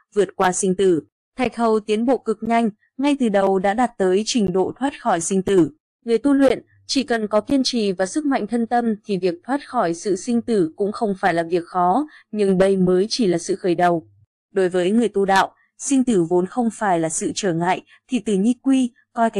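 Gaps between stream segments at 0.44, 1.45, 2.46, 3.47, 4.47, 5.48, 6.49 and 7.50 s insert hard-edged silences of 4 to 17 ms once per second, matching 1-second segments. Unlike dropouts, no audio is lost; the sound simply resumes later.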